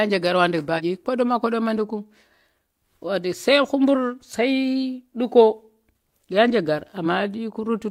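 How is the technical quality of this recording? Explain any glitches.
The speech is marred by three short glitches from damaged data in a compressed stream, at 0.75–0.81 s, 3.90–3.96 s and 7.02–7.07 s. Corrupted bytes make the decoder misread those frames and lose sync while it hunts for the next valid header, so each spot becomes a brief chirp, squawk, click or short hole lasting about 50–60 ms.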